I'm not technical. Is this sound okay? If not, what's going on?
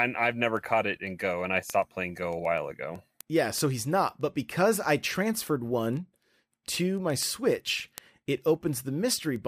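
No. Two pieces of equipment passing the speech along a digital cable are each keeping their own time instead of sharing one clock, and the receiving clock runs off by roughly 150 parts per million. Each time the two drift a sample apart, one sample is dropped or repeated. These word clock ticks are heard as a steady stream of sharp clicks of uneven strength about every 0.15 s, around 70 in all, from 0.19 s to 9.36 s.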